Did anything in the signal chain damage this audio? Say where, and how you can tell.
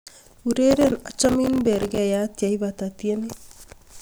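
Yes: processor overload crackle at the driver/buffer stage, 0.71–1.98 s. Dense silent gaps of a few milliseconds each tear the speech into grit, unlike an isolated dropout's single clean hole.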